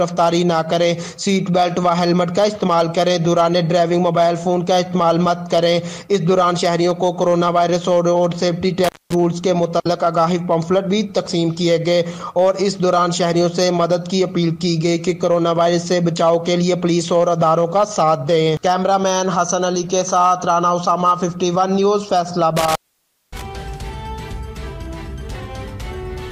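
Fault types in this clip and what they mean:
Intermittent contact: a loose plug or cable briefly breaks the signal path, so the sound drops out with crackle at each edge and faint hiss while open. It happens twice, near 8.8 s for about 220 ms and near 22.6 s for about 570 ms.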